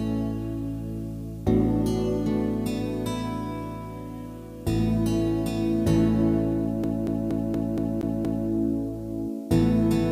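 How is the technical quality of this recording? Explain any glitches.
One clear glitch spoils the recording: a CD stuck on one turn from 6.84 to 8.48 s. A scratch keeps knocking the laser back a track, so a 235 ms slice of audio repeats seven times, each restart marked by a brief mute, giving a rapid, even stutter.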